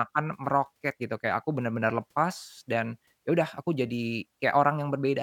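Nothing in this short speech recording stands out as a technical fault; there's nothing to flag anywhere along the way.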